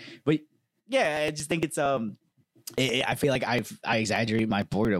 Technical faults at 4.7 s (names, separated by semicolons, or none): periodic USB or driver dropouts